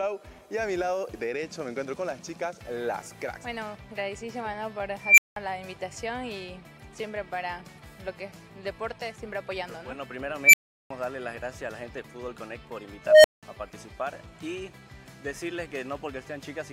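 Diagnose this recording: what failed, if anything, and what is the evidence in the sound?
An unstable filter failed in the processing stage. A tone appears three times and swells rapidly: at 5.01 to 5.36 s, near 2 kHz, over 168 ms; at 10.43 to 10.91 s, near 2 kHz, over 102 ms; at 13.06 to 13.43 s, near 700 Hz, over 181 ms. Each burst ends in silence lasting 186 ms, 372 ms and 186 ms. Bad coefficients made the recursive filter's output grow without limit until it overflowed. The sound then dropped out until the filter reset.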